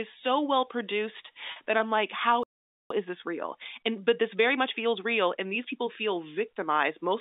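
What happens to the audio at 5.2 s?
At 5.2 s the speech is inside a time-compressed catch-up from 2.90 to 5.90 s, running about 1.15 times fast with small cross-faded cuts. Pitch stays normal, unlike a plain speed-up.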